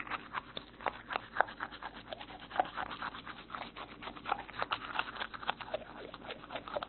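Mains hum runs throughout the clip: a steady 50 Hz tone with a few low harmonics sits under the everyday sounds at roughly 25 dB below them. Power-line current, through a ground loop or a nearby transformer, has leaked into the signal path.

Transcoding between lossy codecs also affects the whole clip. Nothing reaches above 4.2 kHz, and smeared, warbling detail mixes with a second layer of coding artefacts. This likely comes from a low-rate Opus encode later re-encoded as AAC-LC, with the first encoder's cut-off carried through.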